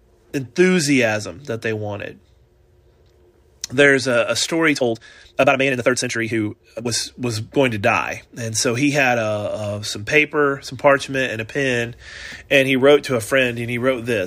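From 4.72 s to 6.94 s the speech runs at about 1.89 times its normal pace while the pitch stays where it was, a time-stretched section. The likely cause is software squeezing that stretch to fit a shorter length, holding pitch by dropping small slices of the waveform rather than resampling. The result sounds rushed, with the tempo jumping abruptly at both edges of the section.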